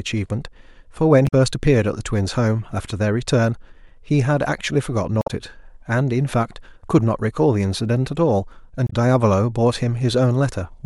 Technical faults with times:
1.24-1.33 damaged data in a compressed stream
5.19-5.30 damaged data in a compressed stream
8.84-8.93 damaged data in a compressed stream

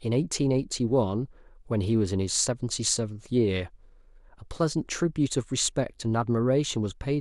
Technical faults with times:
none

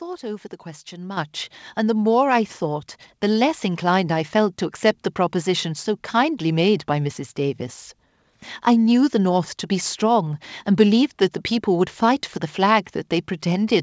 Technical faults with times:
1.17 microphone volume stepped up

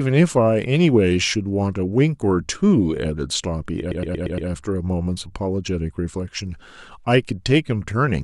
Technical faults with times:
3.90-4.48 repeated frames

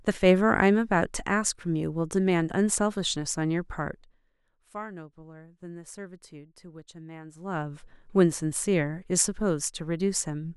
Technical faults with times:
none

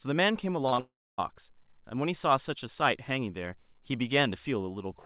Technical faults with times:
0.68-0.80 short concealed packet loss
0.80-1.20 long network dropout

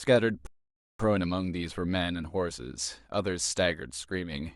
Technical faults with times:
0.47-1.00 rebuffering stall

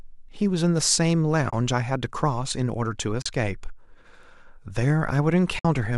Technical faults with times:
1.50-1.53 AAC frame loss with muting
3.21-3.26 AAC frame loss with muting
5.59-5.65 AAC frame loss with muting

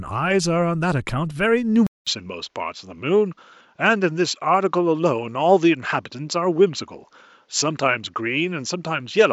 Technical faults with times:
1.87-9.32 input switched to a poorer device

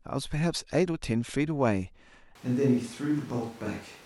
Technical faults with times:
2.35-4.06 switch to a distant microphone

